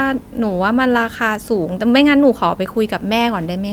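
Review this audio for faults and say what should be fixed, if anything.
Nothing needs fixing: the speech signal shows no technical faults anywhere in the recording.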